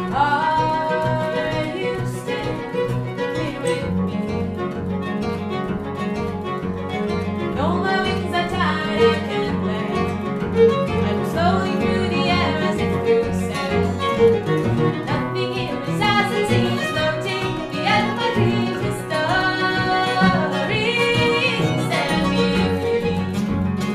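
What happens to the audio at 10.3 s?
Nothing goes wrong at 10.3 s: the audio runs through that moment intact, with no dropout, click, distortion or other fault.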